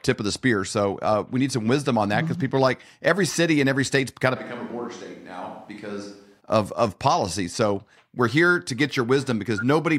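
The close microphone likely drops out from 4.37 to 6.39 s, between "every state's kind of" and "of of policy", forcing a switch to a distant microphone. The speech turns suddenly hollow, roomy and thin, about 10 dB quieter, with room noise roughly 30 dB below it.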